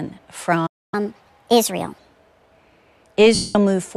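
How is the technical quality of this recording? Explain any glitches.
The recording has three distinct glitches: a dropout, a speed-up that follows it, and a brief smeared loss near the end.

From 0.66 s to 0.94 s the speech cuts to silence for about 260 ms, then resumes where it left off. This is a playback stall, likely the player running short of buffered data or its output thread being blocked until it recovered.

From 0.94 s to 1.99 s the speech runs at 1.25 times normal speed, with pitch raised about four semitones. This is catch-up at higher speed: the player resamples its backlog faster to recover the stalled time, then drops back to normal rate.

From 3.35 s to 3.55 s, about 200 ms, the speech turns into a noisy smear that fades away. This indicates lost LE Audio frames, consistent with around twenty 10 ms LC3 frames dropped, each concealed by repeating the last spectrum with randomised signs, attenuated after the first few frames.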